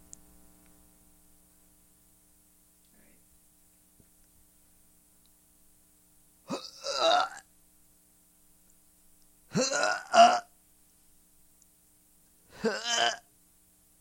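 No technical faults are audible.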